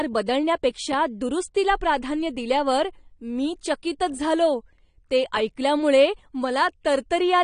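The speech sounds dull and smeared across the whole clip, with nothing above about 9.7 kHz and a warbling, fizzy texture clinging to sibilants and sustained sounds. The likely cause is AAC compression at a low bitrate, consistent with AAC-LC running near 32 kbps: the encoder has pulled its cut-off down and quantised the remaining frequency lines so coarsely that gaps and substitute noise replace the fine high-frequency detail.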